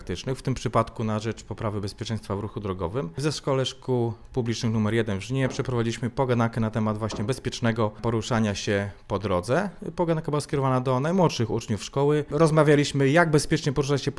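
Nothing in this one trips any alarms, with no glitches, dropouts or other technical faults turning up anywhere along the way.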